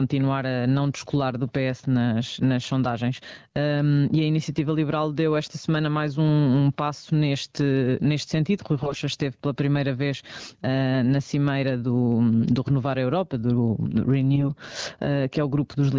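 Gain pumping runs through the whole clip. The level keeps surging and dropping, by about 15 dB. The likely cause is gain set far too high at the microphone, with a fast limiter or compressor pulling it back down on every loud sound. Loud and soft parts sit closer together, so the speech sounds squashed.

AMR bit errors first appear from 8.78 to 8.98 s, just before "esteve pela primeira vez". The span fits about ten 20 ms frames. Flipped bits in the less protected part of each frame got past the check on the key bits. The decoder then placed its excitation pulses wrongly and used wrong fine pitch, gain and spectral values. The voice keeps roughly its pitch and level but turns hoarse, scratchy and gargly. The error rate here is high, roughly 15 percent.

A second burst of AMR bit errors follows from 14.34 to 14.46 s, just after "do do". It is shorter, fitting about five frames, with a lower error rate of roughly 7 percent. 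It has the same hoarse, gargly texture. The AMR-WB link itself carries the speech at 12.65 kbit/s. Nothing sits above 8 kHz.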